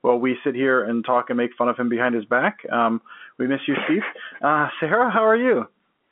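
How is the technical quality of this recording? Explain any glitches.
Nothing in this speech recording counts as a glitch: it simply has the narrow telephone sound you'd expect from an ordinary landline line, roughly 200 Hz to 3.4 kHz, which fits standard G.711 mu-law telephone coding.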